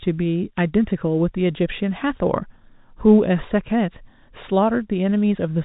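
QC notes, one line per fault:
No faults; the speech comes over a G.711 telephone path, nothing above 3.8 kHz, as that format delivers.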